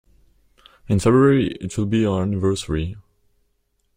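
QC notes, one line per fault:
Nothing to flag here, as the speech comes across without any dropouts, glitches or other trouble along the way.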